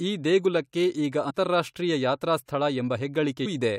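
At 1.29 to 1.31 s, just after "ಈ ದೇಗುಲಕ್ಕೆ ಈಗ", compressed frames are skipped. Around three frames, roughly 70 ms, are lost, which fits frames of about 23 ms, so the speech jumps ahead. The spectrogram shows a sudden discontinuity.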